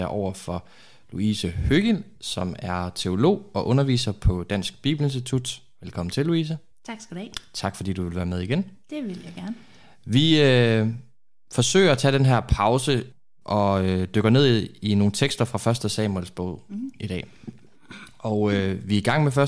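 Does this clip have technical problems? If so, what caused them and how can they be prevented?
No, no technical faults are audible.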